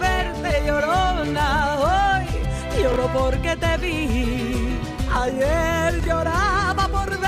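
At 2.92 to 2.96 s and again at 6.00 to 6.06 s the sound briefly jumbles: chunks out of order. A 20 ms chunk played one slot late in the first case and two slots late in the second, so each spot has three hard joins. Unlike a dropout or skip, nothing goes silent or missing. The same material is simply reshuffled, giving a short scrambled stutter rather than a gap.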